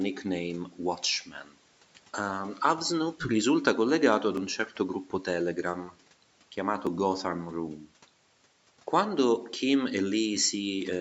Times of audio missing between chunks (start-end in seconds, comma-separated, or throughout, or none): 1.88, 4.37, 6.87, 9.36